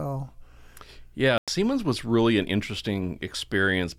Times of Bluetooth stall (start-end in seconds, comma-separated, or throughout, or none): 1.38-1.48